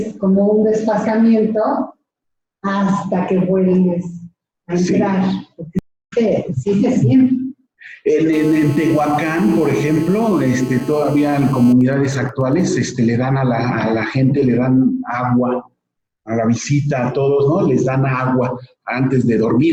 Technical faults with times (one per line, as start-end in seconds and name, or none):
5.79-6.13 stream reconnect
8.33-11.73 GSM phone buzz
11.81-12.78 GSM signalling bursts